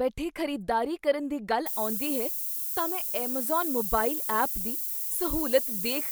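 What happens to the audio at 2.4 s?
From 1.66 s to the end of the clip, the speech is quantised to just 5 bits, with noise shaping pushing the rounding error toward high frequencies. At 2.4 s this is heard as a steady, thin hiss climbing sharply in the top band, nearly as loud as the speech.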